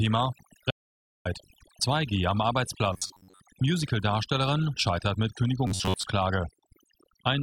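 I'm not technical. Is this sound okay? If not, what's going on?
No. The background drops away all the way through and breaks up into twinkling specks. That's overdone noise removal: a cleanup tool set too strong, cutting away quiet parts of the voice along with the hiss.

From 0.70 to 1.27 s the sound fades out and back in, leaving a soft hole a bit over half a second long. That's AAC frame loss with muting: chunks of compressed audio went missing, and the player filled them with silence.

At 2.93 to 3.40 s, and again at 5.67 to 6.03 s just after "scheitert mit", the voice becomes a rigid metallic buzz at about 94 Hz. That's robotic sound from repeated short buffers, likely the player looping tiny fragments over and over while much of the real audio is skipped.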